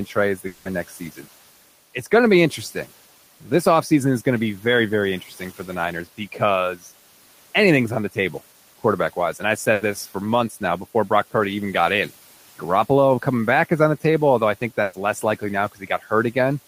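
From 0.47 to 0.67 s the speech gives way to a fading held buzz or hiss of about 180 ms with no silence, then picks up further on with that stretch gone. This is likely a long network dropout, the receiver stretching the last sound while nothing arrived.

At 9.73 to 9.83 s and 14.83 to 14.95 s there are shorter smeared, fading fills of about 80 and 100 ms before the speech jumps ahead. These are bursts of packet loss, where a run of audio never arrived in time and was filled then skipped. The room noise sits about 24 dB below the speech.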